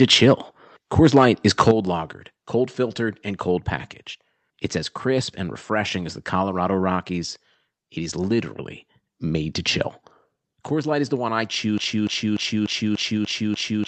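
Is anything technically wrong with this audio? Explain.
Yes. From 0.98 to 1.71 s there is microphone overload: the peaks flatten harshly, running about 4 dB past the converter's limit, likely from input gain set too high. Unlike codec distortion, it crackles only on the loudest moments.

At 1.71 s, just before "lagered cold filtered and", the microphone volume is stepped down: the level drops abruptly by about 7 dB, likely from call software reducing input gain after the clipping. This is a single step, not a gradual fade.

From 11.78 s to the end, after "is the one I", a broken-record loop repeats an identical 294 ms fragment, likely from a stalled stream resending its last buffer. The exact repetitions set it apart from stutter or packet-loss dropouts.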